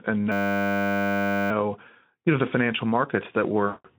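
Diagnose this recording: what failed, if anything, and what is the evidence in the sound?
System hang loop, 0.32 to 1.51 s, driver or buffer stage: the hardware cycled its ring buffer, repeating one 10 ms slice as a steady 100 Hz buzz.

VoIP packet loss concealed by the speech codec, 3.66 to 3.86 s, network stage: about 180 ms went missing, and the Speex decoder extrapolated its last frame into a fading, buzzy tone or coloured noise.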